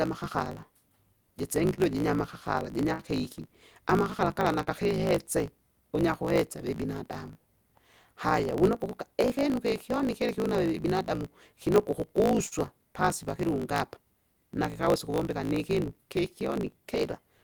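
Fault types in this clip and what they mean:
block size mismatch (truncated): A steady 54.4 Hz buzz runs under the whole recording, and the speech moves 1.16 times too fast at about its normal pitch. The end of every block is discarded between stages, which fits one stage writing 1024-sample blocks.
scattered short gaps: Between 1.67 and 5.11 s, the speech stays clear but picks up brief ticks and smears at around seven spots. Lost or late packets left small holes, the longest around 50 ms, each patched by continuing the preceding sound.
short stall from a late packet: At 12.47 to 12.54 s, just before "pasi pakilunga apa", a sound is held for 57 ms too long. A packet arrived late, the jitter buffer ran dry, and the receiver stretched the last sound, then resumed with nothing missing.
jitter buffer speed-up: From 14.82 to 15.54 s, the speech briefly hurries to 109% of its pace without any change in pitch. 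The jitter buffer held excess audio, so the receiver trimmed roughly 70 ms in small pitch-period pieces to reduce the delay.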